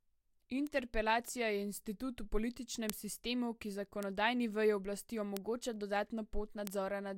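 It's a speech clip with five bit error spikes, single-sample ticks at 0.67, 2.90 (just before "sistemu ki"), 4.03 (between "sistemu ki" and "veji oblasti"), 5.37 (right after "veji oblasti") and 6.67 s. A flipped bit makes one sample jump and snap back, producing a sharp broadband tick unrelated to the voice.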